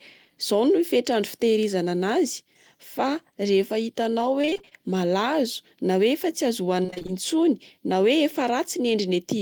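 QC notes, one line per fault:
4.41–4.73 s, repeated packet loss (robotic sound): between "rehefa hitanao" and "malazo na", packets went missing again and again. Each short hole, the longest 26 ms, was patched by stretching the preceding sound, so about half of this span is synthetic fill and the speech turns choppy.
6.83–7.10 s, repeated packet loss (robotic sound): another rapid run of dropouts, the longest 22 ms, with nearly half the span concealed, giving the same choppy sound with pieces missing.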